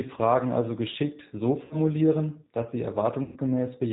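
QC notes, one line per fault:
Throughout: G.729 codec. The speech sounds plainly rough and synthetic, with nothing above 4 kHz, which fits an 8 kbit/s G.729A stream rebuilding each frame from a model.
1.65–1.77 s and 3.24–3.38 s: VoIP packet loss concealed by the speech codec. About 60 ms, then 120 ms, of audio went missing. The decoder stretched the last sound into a fading buzzy tone or coloured noise, and the speech stays weak briefly afterwards.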